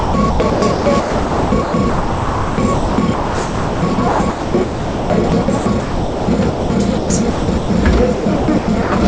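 From 0.0 to 6.7 s, again from 6.98 to 7.7 s, and from 8.14 to 8.92 s, the sound is choppy, with about 4.5 s, 0.42 s and 0.44 s of it replaced by flat comfort noise. This is likely sound chopped by the voice detector, with quieter parts judged silent and not sent. On a spectrogram, which shows nothing above 8 kHz on this G.722 call path, the real sound alternates with smooth, featureless noise bands. The waveform shows abrupt level steps at each switch.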